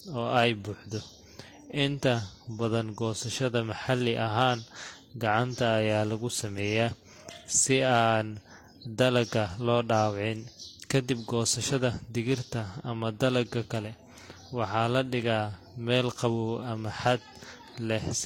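Transcoding between lossy codecs runs through the whole speech recording, from start to finish. The likely cause is that the audio was encoded twice: first by something resembling Vorbis at a moderate rate, then again by HE-AAC at a low rate near 32 kbit/s. The second encoder spends its limited bits reproducing the first encoder's artefacts and then adds its own band-replicated top end, so both kinds of artefact are heard together. Nothing remains above 16.2 kHz.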